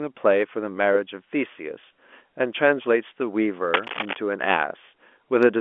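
Speech heard over a telephone-band line carries a burst of cable scratch noise from 3.72 to 4.15 s: dense, uneven rustling almost as loud as the talker, likely from a worn connector or cable being moved. Unlike evenly spaced digital clicks, its bursts cluster irregularly.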